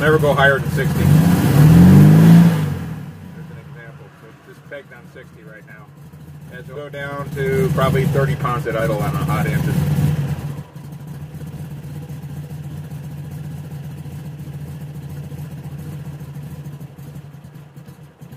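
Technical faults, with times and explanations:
6.75–6.77 s, skip ahead: A stretch of audio was discarded, either lost in transit or dropped by the jitter buffer when it overflowed, while later audio was already queued behind it. Roughly a second of sound is missing, and nothing fills the hole. The audio on either side of the cut is spliced almost directly, so playback lurches forward abruptly. The delay falls by about the same second in one step.
8.54–8.82 s and 9.62–11.93 s, jitter buffer speed-up: The receiver's jitter buffer had built up more audio than its target, so it repeatedly cut out short pieces a pitch period or a few long to bring the delay back down. The first stretch runs at 116% speed and loses around 50 ms. The second runs at 111% and loses around 300 ms. Pitch stays unchanged, but both passages sound hurried.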